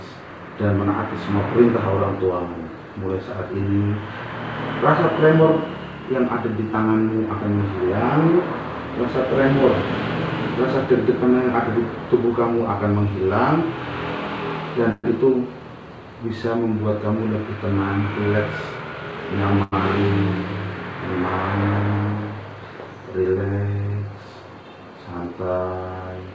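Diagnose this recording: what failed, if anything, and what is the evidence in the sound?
At 14.92 to 15.06 s the sound holds as a buzz or hiss for about 120 ms, fading into roughly 30 ms of silence before carrying on where it left off. That is a call audio freeze at the network and jitter-buffer stage, likely from packets delayed in transit. Nothing is lost, which separates it from a dropout or cut.

At 19.63 s a short stall from a late packet holds the last sound for about 90 ms, with a slight buzz or dip. The jitter buffer ran empty and concealed the wait by stretching. Unlike the freeze, it never fades to silence, and again nothing is skipped. The G.722 band limit at 8 kHz is heard throughout.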